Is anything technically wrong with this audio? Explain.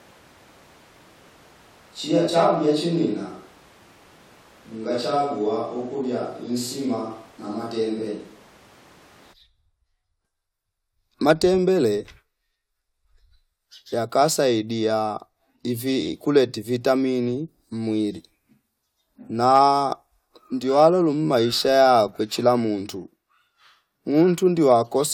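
Yes. From the start to 9.32 s, the speech sounds like a switch to a distant microphone. It is roomy, hollow and thin in the bass, roughly 5 dB quieter, with room noise about 25 dB below it. The close microphone likely dropped out. At 9.32 s the fuller sound returns abruptly.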